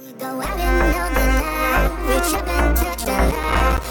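From 2.99 to 3.87 s the processor falls behind and keeps missing its deadlines for the small audio buffers, which points to buffers of about 5 ms, with around thirty of them left unfilled. Each missed buffer drops out to silence with abrupt edges. This processor overload crackle is heard as a gritty tearing over the sound for nearly a second, ending just before the close of the clip.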